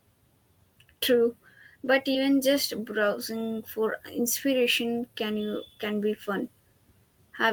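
At 2.13 s the speech briefly smears and wobbles until about 2.30 s. This is short concealed packet loss: some 20 ms of audio never arrived in time, so the receiver extended the preceding sound to cover the hole, adding roughly 10 ms, then blended back into the real signal.

Overlapping that event, from 2.15 to 2.17 s, and again from 5.36 to 5.42 s, the sound turns rougher and noisier without any gap. Each is a lost packet rebuilt from error correction. The decoder played low-bitrate copies carried in the following packets: 20 ms at the first spot, and 40 ms at the second, which fits two packets.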